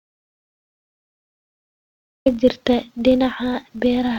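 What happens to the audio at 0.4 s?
At 0.4 s you're in a dropout to silence that's already running when the clip starts and lasts until 2.26 s: dead silence with no room tone, likely from lost input. There's also a filter restarted on every block throughout, giving a buzz near 46.9 Hz that fits a 1024-sample buffer, though it follows level, so it stays silent here.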